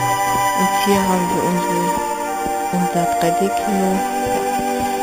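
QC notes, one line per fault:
Throughout, imaging from sample-and-hold upsampling: there's a bright metallic fizz riding on everything, sitting about 15 dB under the main sound and rising and falling with it. Nothing real lives above 4 kHz, but mirrored copies fill the 4 to 8 kHz band and repeat around each multiple of 8 kHz. That points to an 8 kHz source stepped up to 44.1 kHz by just holding each sample, with no smoothing filter to catch the images.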